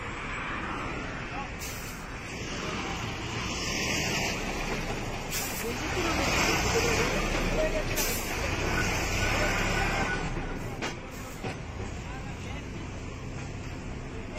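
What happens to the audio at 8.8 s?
A repeated buffer occurs from 8.79 to 8.81 s. New audio did not reach the output in time, so the last block was played once more. That block lasts about 21 ms, which fits a 1024-sample buffer. The same short slice of sound plays twice, with a hard join where the copy starts. Because the slice is so short, it comes across as a brief click or buzz. Roughly 20 ms of fresh audio is lost.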